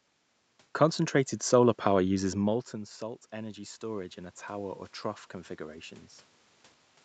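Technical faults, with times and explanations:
2.08 to 4.87 s, automatic gain rising: the voice and room noise swell together slowly over nearly three seconds, climbing about 4 dB. Around 2 s the talker moves away and the input drops about 14 dB, so the automatic gain control gradually raises its gain to compensate.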